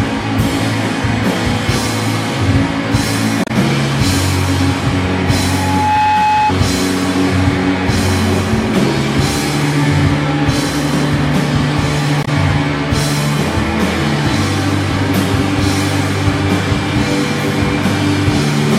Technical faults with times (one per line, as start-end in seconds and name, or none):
3.44-3.50 damaged data in a compressed stream
5.37-6.54 loudspeaker feedback squeal
12.21-12.28 damaged data in a compressed stream